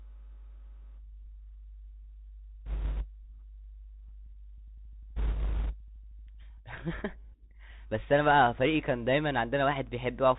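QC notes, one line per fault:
Throughout: Bluetooth CVSD headset codec. The speech is boxed in below 4 kHz, which fits a 64 kbps CVSD link. Each sample is only a one-bit step up or down, so the adaptive step can't keep up with sharp high sounds. S sounds go scratchy, with a grainy hiss underneath.
2.66–3.06 s and 5.16–5.76 s: bit errors on a Bluetooth voice link. In both stretches a rushing crackle rides over the speech, at a level that points to a few percent of bits flipped. No loud clicks, because each CVSD bit only nudges the signal slightly and the damage fades quickly.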